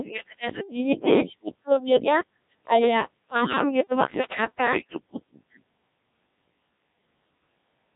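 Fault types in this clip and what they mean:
Codec 2 vocoder: the speech was coded as pitch, voicing and envelope parameters, a 1.3 kbit/s rate, then resynthesised from sine waves, leaving it heavily robotic and buzzy, with nothing above 3.8 kHz.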